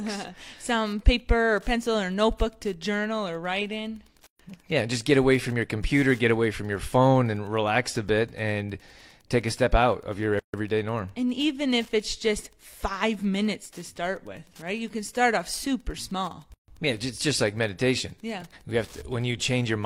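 Speech with Wi-Fi interference throughout: a steady ticking about ten times a second, matching a 102.4 ms beacon period, sitting roughly 35 dB below the voice. Its fixed tenth-of-a-second rhythm separates it from mobile-phone buzz, which pulses far faster and sounds harsher. There are also three gaps at joins of encoded pieces, spaced exactly 6 s apart: after "journal or write in" at 4.27–4.39 s (125 ms), after "step out of your" at 10.39–10.54 s (144 ms), and after "start off super small" at 16.54–16.68 s (144 ms). Encoder start delay and last-frame padding left silence at each join. Unlike a packet dropout, the speech resumes exactly where it stopped, with nothing missing.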